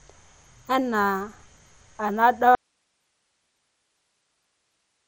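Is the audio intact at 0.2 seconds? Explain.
No. At 0.2 s, as throughout, the speech has likely passed through MP2 compression at a low bitrate, which fits about 64 kbps. Starved sub-bands drop out and the rest are coarsely quantised, so nothing above 15.9 kHz remains and a gurgling, granular roughness is plainly audible.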